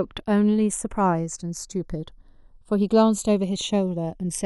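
A slow flanging sweep runs through the speech: channels drifting apart, their clocks off by roughly 70 ppm, so the inter-channel delay creeps toward 0.4 ms.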